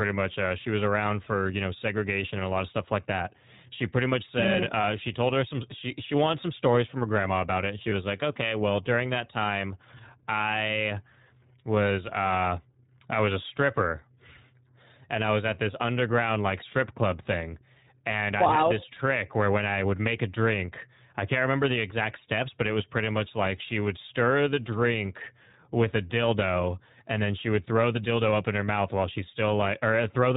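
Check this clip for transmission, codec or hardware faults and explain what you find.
Two faults are present. The whole recording passes through the iLBC codec, and iLBC frames are lost twice.

The iLBC codec runs throughout the speech. It is a narrowband VoIP codec. It codes each 20 ms frame on its own, without relying on the frame before. It runs at 15.2 kbps, and the damage is plainly audible. Nothing above 4 kHz survives, so the speech sounds muffled and thin. The voice stays clear but has a rough, slightly synthetic texture.

Lost iLBC frames occur at 4.82 to 4.85 s and again at 7.90 to 7.93 s. Each gap is about 20 ms, which fits one missing packet. The decoder fills the hole by repeating the last pitch cycle with added noise. Each gap sounds like a very brief held vowel, faintly buzzy or breathy. Each frame decodes independently, so normal speech returns immediately afterwards.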